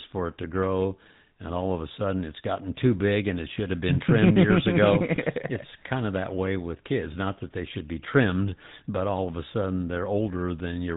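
Throughout the recording the speech carries the buzzy, gravelly roughness of the GSM full-rate codec, and the damage is plainly audible. The codec rebuilds each voice from a vocal-tract model excited by sparse, regularly spaced pulses, so the fine texture between pulses is lost and a grainy rasp is left on voiced sounds. Nothing survives above 4 kHz, which gives a dull telephone band. Unlike a plain low-pass or narrowband filter, the grit sits inside the voice itself, and the rate this suggests fits a 13 kbps coder.

From 5.16 to 5.19 s there is a brief lost GSM frames event. The gap points to a single missing 20 ms frame. The decoder covered it by reusing the previous frame's settings, so the sound briefly freezes into a short metallic ring instead of dropping out. That sets it apart from a clean dropout or click. The loss is too short to fade toward silence, so it comes across as a tiny rough smear in the speech.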